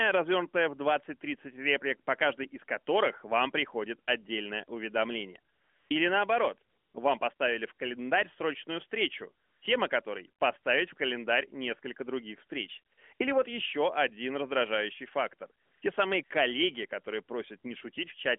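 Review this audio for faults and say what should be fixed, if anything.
AMR comfort noise appears in pauses at 5.54–5.90 s, 6.70–6.94 s, 7.34–7.40 s, 9.46–9.62 s, 12.94–12.98 s, 13.14–13.20 s, 15.62–15.82 s and 16.24–16.30 s, lasting 40 to 360 ms. The sender's voice activity detector judged the talker silent and stopped sending speech frames. The receiver then filled each gap with synthetic hiss built from a rough level and spectral shape, so the real background is swapped for smooth, steady noise that switches in and out. On a waveform, each gap becomes a flat, even band of low-level noise with abrupt edges. On a spectrogram, the natural background texture gives way to uniform, featureless shading confined to the roughly 250–3400 Hz phone band. The narrowband codec carrying the speech adds only light damage throughout. To prevent this, disable discontinuous transmission on the call, or make its voice activity detector less aggressive, so that real background is sent through pauses instead of being replaced.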